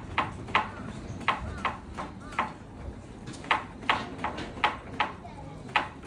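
Nothing here sounds wrong at all; the audio just runs along from beginning to end without a single glitch or interruption worth pointing out.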